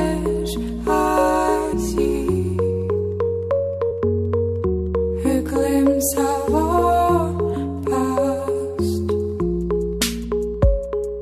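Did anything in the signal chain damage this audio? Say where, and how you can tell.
Yes, at the codec stage. Around 1.72 s there's a short smeared blip where the audio jumps forward by about a tenth of a second. That's compressed frames skipped: a handful of roughly 23 ms frames never got decoded, and their overlap blurs the join rather than clicking.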